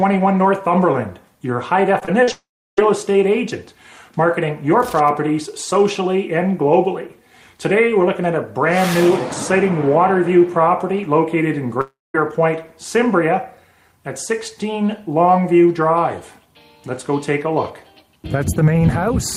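Right around 2 s there's a cluster of short concealed packet loss: 1.99 to 2.03 s, 2.05 to 2.09 s, and 2.23 to 2.29 s, each losing 20 to 40 ms of audio. The decoder papered over each gap by extending the last bit of sound and then blending back in, so you hear quick smears or little wobbles rather than clean holes. Anything very brief in those spots can simply go missing.

Straight after that, from 2.31 to 2.79 s, the audio falls out, most likely a long network dropout. The receiver carries the last sound on as a fading buzz or hiss, then there's about a third of a second of near silence before the audio picks up again further along, minus what was lost. The same thing happens at 11.81 to 12.16 s, again likely a dropout, with a similar concealment tail and about 0.2 s of quiet before it resumes.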